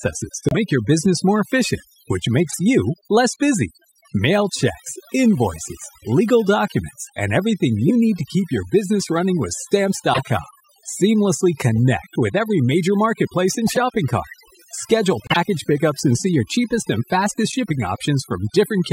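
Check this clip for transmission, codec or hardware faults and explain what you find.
Three faults are present: heavy-handed noise reduction across the whole recording, plus two kinds of corrupted compressed frames, some muted and some played through.

Overdone noise removal affects the entire speech clip. A noise reduction stage set too strong cuts frequency bands near its noise estimate, leaving near-silent, twinkling gaps.

Corrupt frame muted occurs at 0.49–0.57 s, just before "your business more efficient", and at 15.23–15.37 s. The decoder rejected damaged frames and the player substituted silence. The result is abrupt holes that fit roughly four and five frame lengths.

Corrupt frame decoded occurs at 2.48–2.59 s (between "business more efficient which" and "you less busy"), 7.87–7.91 s, 10.13–10.22 s, 11.77 s, 13.67–13.82 s (after "every major marketplace and") and 17.50–17.60 s. 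Damaged frames were played anyway, putting misplaced energy into squeaks and noise bursts. The loudest bursts, at 7.87 and 10.13 s, peak around -5 dBFS, and the one at 11.77 s is fainter.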